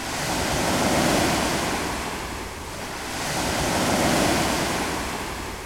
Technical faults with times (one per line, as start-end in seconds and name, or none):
none